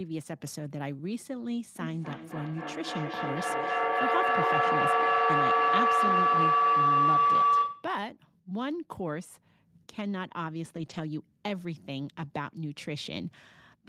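From 1.8 to 7.97 s a feedback howl builds. Sound from the loudspeaker re-enters the microphone and gains level on each trip, settling near 1 kHz, pulsing roughly every third of a second, peaking about 9 dB above the speech. Unlike echo, the repeats swell rather than decay.

From 10.77 to 10.99 s, a lost packet rebuilt from error correction leaves about 120 ms that sounds rougher and noisier, which fits six packets played from low-bitrate copies. Unlike plain loss concealment, there is no gap or smeared fill.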